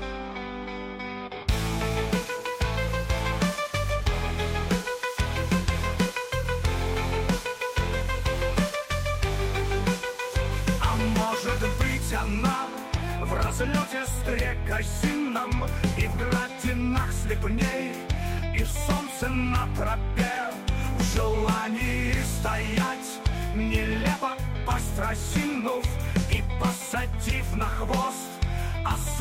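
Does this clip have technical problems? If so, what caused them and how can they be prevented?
No, nothing stood out as a technical problem on listening to this clip.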